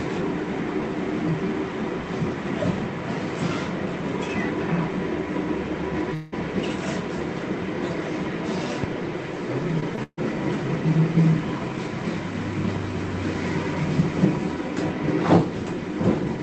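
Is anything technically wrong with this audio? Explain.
Yes. There are three kinds of network fault in this audio.

From 6.14 to 6.34 s, the sound turns into a fading buzz or hiss for about 0.18 s, then resumes further on. This is likely a long network dropout, with the receiver stretching the last sound over the gap.

At 9.80 to 9.84 s and again at 9.96 to 9.99 s there is short concealed packet loss. About 20 ms went missing each time, and the receiver patched the hole, leaving a brief smear.

From 10.03 to 10.19 s comes a burst of packet loss covering about 140 ms. The receiver continues the last sound and turns it down. It fades to silence for the final 60 ms before the audio jumps ahead.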